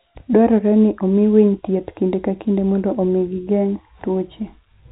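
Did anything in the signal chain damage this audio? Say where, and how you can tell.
No, nothing in the chain damaged this speech. What can be heard of the path is G.711 telephone coding, which fits A-law at 64 kbps: the band stops around 3.9 kHz, and any quantisation noise riding on the level is faint at most.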